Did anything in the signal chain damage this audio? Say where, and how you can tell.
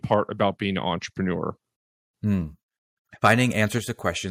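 Yes. At 0.12 to 0.14 s, and again at 3.24 to 3.33 s, peaks are flat-topped and crackle harshly. They exceed full scale by about 1 dB and about 4 dB. A few percent of samples are clipped. This is likely microphone overload at the converter.

At 3.78 s, voice and background drop together by about 4 dB. The drop is instant, not gradual. It follows the stronger clipping shortly after. Call processing likely stepped the microphone volume down to stop the overload.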